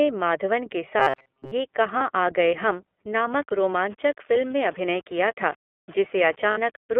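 Speech squeezed through the iLBC codec the whole way, and the damage is plainly audible. The band sits between about 250 Hz and 3.4 kHz, so there's no air at the top and little body at the bottom. Each frame's excitation is coded on its own, which gives the voice a rough, slightly synthetic edge. That behaviour fits iLBC's 13.33 kbps mode with 30 ms frames. Right after "माधवन के", from 0.995 to 1.53 s, you get robotic sound from repeated short buffers, most likely because audio arrived too slowly and the player kept looping the last scrap to fill the time. Most of that stretch is repeats rather than fresh audio, and the looping forces a rigid metallic buzz at about 133 Hz that only loosely follows the speech. A repeat rate of 133 Hz points to a buffer of around 7.5 ms. There are lost iLBC frames at 1.98 to 2.02 s, just before "आ गए हम'", where a 30 ms gap gets patched by repeating the last pitch cycle with some noise, so it sounds like a brief held, buzzy vowel before the voice snaps back. 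It happens again at 6.51 to 6.58 s, a 60 ms hole that fits two dropped frames, and the concealment drags a bit longer there. From 3.32 s to the end, after "आ गए हम'", there's low bit depth without dither. The sound points to roughly 6 bits with plain rounding. Because the rounding error tracks the signal, quieter parts turn gritty and grainy, with the distortion sitting only around 25 dB under the speech.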